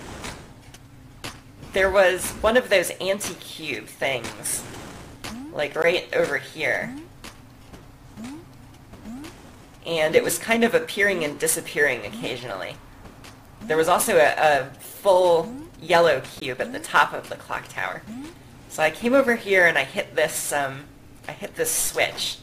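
At 5.82 s and again at 16.4 s, the audio drops into a block of digital silence about 16 ms long. Each time, the output buffer was likely not filled in time and went out as zeros. With no fade at either edge, the sound cuts out and back abruptly. On a waveform the trace snaps to a near-flat line and jumps back. A spectrogram shows a thin empty vertical stripe.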